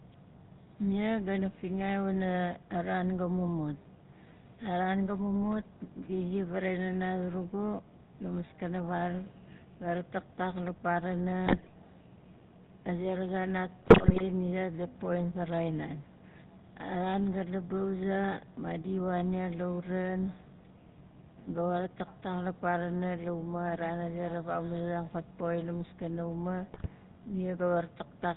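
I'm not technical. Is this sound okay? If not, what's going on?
No, it isn't. The whole clip went through the GSM full-rate codec, the old mobile-phone voice compression. It rebuilds the voice from a rough model and throws away everything above 4 kHz, so the speech sounds clearly buzzy, gravelly and muffled the entire way through.

On top of that there are three bursts of GSM bit errors, where scrambled data from a bad phone link garbled the decoder. Listen at about 11.46 to 11.69 s, at 13.82 to 14.23 s (between "zan nat" and "ni zait gat poxin"), and at 26.74 to 26.87 s (right after "la maskana uma"). Each one briefly breaks into squawks, pops or gargling.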